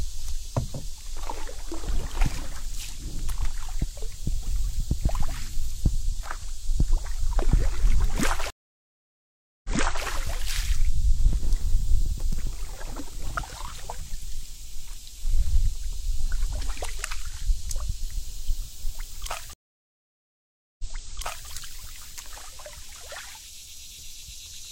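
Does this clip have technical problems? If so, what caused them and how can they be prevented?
Yes. Two stream reconnects occur, at 8.50 to 10.06 s and 19.53 to 21.49 s. The connection drops and the audio goes silent for 1.14 s, then 1.26 s. A fresh decoder restarts mid-stream. The server resends a burst, so playback resumes 0.42 s, then 0.70 s earlier. Prevent this with a stable connection and a larger client buffer that rides out brief drops.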